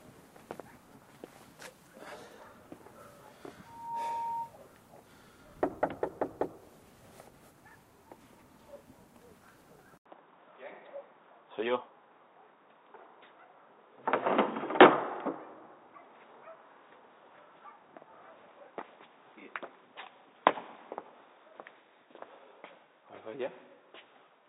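This is a recording of everyday sounds with two separate problems. From 3.65 to 4.54 s there's loudspeaker feedback squeal. The mic is hearing its own speaker, and a 926 Hz tone swells up over about a third of a second until it's roughly as loud as everything else, then drops away. At 9.98 s there's an 80 ms gap, and from then to the end the sound is dull and boxy. Nothing gets through above 3.8 kHz, the level jumps by around 5 dB, and there's a new noise floor sitting about 50 dB down. That's most likely the input switching to a poorer device partway through the recording.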